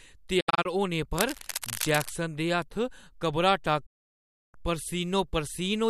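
A speech clip with two kinds of fault. The first is a digital broadcast dropout. From 0.40 to 0.66 s the sound mutes in several short holes. About 144 ms goes missing across 240 ms, and the longest gap is 72 ms. Each mute fades in roughly 8 ms. This is the receiver silencing frames that failed their checks. A longer dropout runs from 3.86 to 4.55 s, with about 672 ms lost in one stretch. The pattern fits about six lost frames in the first event and 28 in the second. The speech sent during those gaps is gone. From 1.18 to 2.15 s there is cable scratch noise. Dense, uneven bursts of scratching sit over the speech, roughly 10 dB below it. The likely cause is a worn cable, connector or control being moved. Its contact resistance jumps around as it moves, and that adds the noise.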